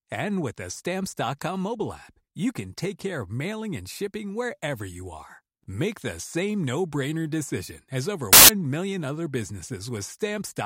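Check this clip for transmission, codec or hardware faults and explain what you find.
One fault is present in this speech clip. From 8.33 to 8.49 s, a burst of loud, harsh broadband noise of about 0.16 s replaces the audio, between "decision as over" and "million other". These are samples built from the wrong bytes. For that stretch, the bytes of each sample were assembled incorrectly, whether shifted by one byte, taken in swapped order, or read at the wrong alignment. The rapidly varying low-order bits end up dominating every value, which produces noise instead of the signal.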